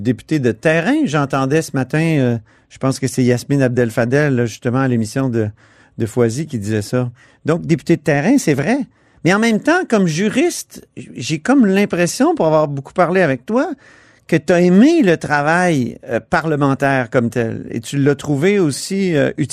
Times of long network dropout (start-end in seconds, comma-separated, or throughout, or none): none